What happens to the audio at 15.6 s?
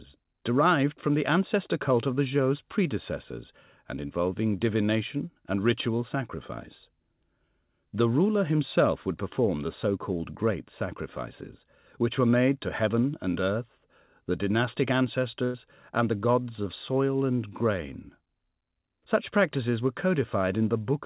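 A brief held, fading smear replaces the sound from 15.44 to 15.56 s, a burst of packet loss: about 100 ms went missing and was concealed by extending earlier audio.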